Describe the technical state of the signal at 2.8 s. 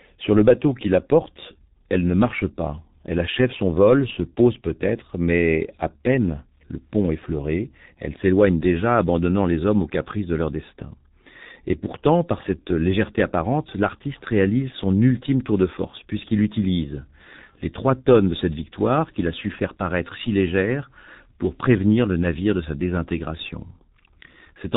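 At 2.8 s you're hearing G.723.1 codec damage, and it runs through the whole clip. The speech is heavily muffled, with nothing above about 3.8 kHz, and the sound fits a very low bitrate of around 6 kbit/s. The codec chops audio into 30 ms frames and its model of the voice only updates frame by frame, so consonants smear together and the voice comes across hoarse.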